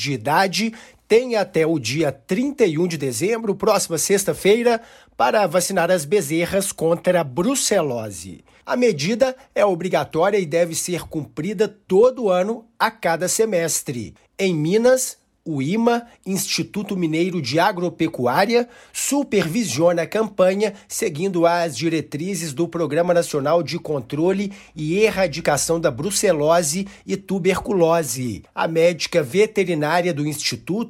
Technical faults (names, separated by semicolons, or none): none